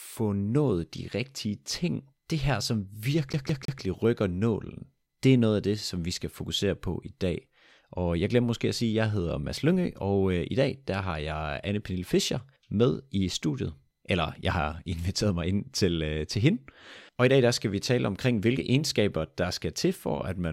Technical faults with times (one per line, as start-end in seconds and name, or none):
3.33-3.81 CD stuck on one turn